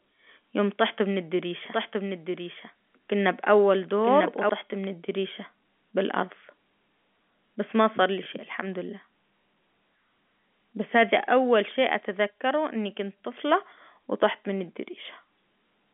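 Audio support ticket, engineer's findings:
Doubled audio track, 1.65 to 4.49 s. A second full-band copy of the same audio runs about a second behind the original, at about 5 dB lower. Likely cause is a slower second capture path or an edit holding two offset copies. This is not echo or reverb: the copy has no decay and no room colour, and it starts and stops abruptly.

Packet loss with last packet repeated, 8.24 to 8.26 s. A single 20 ms packet went missing, and the receiver replayed the previous packet to fill the gap. This differs from a plain dropout because the gap holds repeated audio rather than silence. The single repeat comes through as a small blip. One packet is too short to build a sustained buzz. Telephone band limiting throughout.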